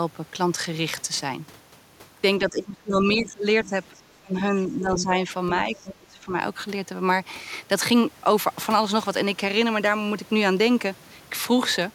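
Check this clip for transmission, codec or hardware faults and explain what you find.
Two echo-canceller faults affect this speech, both in the stretch from about 2.4 to 6.3 s, where both sides of the call appear to be talking at once.

Speech suppressed in double talk occurs from 2.4 to 3.46 s, 3.66 to 3.73 s, 4.08 to 5.3 s and 5.66 to 6.32 s. The talker dips by roughly 25 dB at worst. The likely cause is the canceller mistaking the talker for echo and attenuating both.

The other side's voice leaks through briefly at 3.65 to 3.7 s, 3.97 to 4.01 s and 4.99 to 5.04 s. It sits roughly 35 to 10 dB below the talker. This is likely residual loudspeaker echo left in the microphone signal. Unlike crosstalk, it appears only in these short scraps within the double-talk period.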